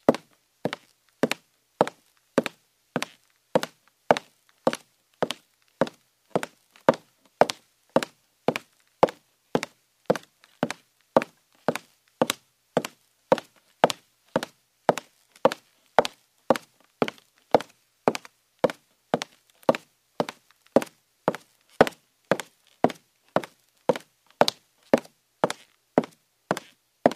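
Nothing stood out as a technical fault on listening to the recording.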